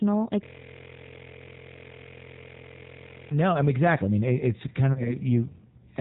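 G.729 codec, throughout: the speech is squeezed to about 8 kbit/s and rebuilt from a vocal tract filter, pitch predictor and sparse pulses. Nothing above 4 kHz survives, so the sound is band-limited, slightly rough and synthetic, with plainly audible codec damage.

System hang loop, 0.44 to 3.31 s: the system froze while the sound hardware kept replaying the same ring buffer. A 23.22 ms slice, which fits a 1024-sample buffer, repeats over a hundred times as a steady buzz at 43.1 Hz, ending just before "know I mean exactly".

VoIP packet loss concealed by the speech codec, 4.93 to 5.17 s: about 30 ms went missing, which fits a single lost packet. The decoder extended its last pitch and filter with falling gain, producing a brief stretched sound that fades, and the speech stays weakened until about 5.17 s.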